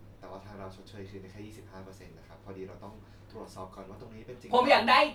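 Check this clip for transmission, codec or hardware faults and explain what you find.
Checking the clip turns up no faults to explain.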